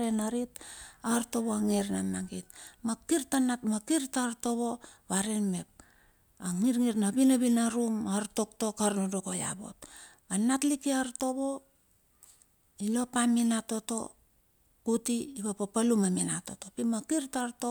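No technical faults are audible.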